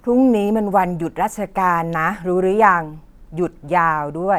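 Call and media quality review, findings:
No faults found in clip.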